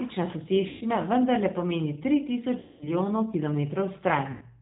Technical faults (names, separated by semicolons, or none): G.729 codec; VoIP packet loss concealed by the speech codec